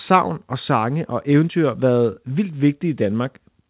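Nothing goes wrong here; the speech just carries the narrowband character of a call line, with nothing above about 4 kHz, which fits a G.711-style phone codec doing its ordinary job.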